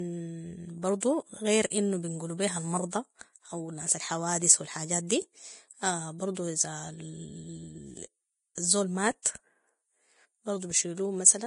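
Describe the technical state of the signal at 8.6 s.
Just before 8.6 s, from 8.55 to 8.58 s, there is pre-echo: a 24 ms smear of hiss runs ahead of a sharp onset. The codec's quantisation noise fills its whole transform block, so it arrives before the attack. Room reflections come after an onset, never before it.

Throughout, the audio carries heavy damage from Vorbis compression. Nothing sounds above 10.6 kHz, and the treble is grainy and hissy, which points to a likely bitrate of around 30 kbps. Broadband noise would extend past that cut-off rather than ending sharply at it.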